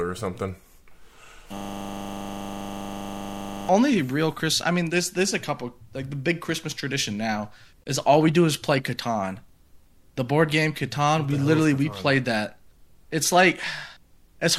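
A system hang loop runs from 1.57 to 3.69 s. The playback system stalled while the hardware kept replaying the same 40 ms stretch of its buffer about fifty times, so the speech freezes into a steady buzz at 25 Hz.

A gap at a join of encoded pieces appears from 7.84 to 7.86 s. Separately encoded segments were spliced without removing the encoder's leading delay and end padding, leaving a 23 ms gap with smeared edges before the speech resumes where it stopped.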